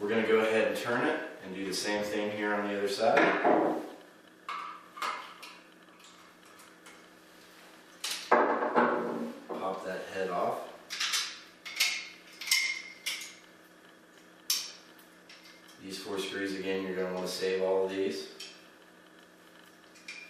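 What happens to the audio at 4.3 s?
Nothing goes wrong at 4.3 s; the audio plays through that moment intact, with no dropout, glitch or other fault.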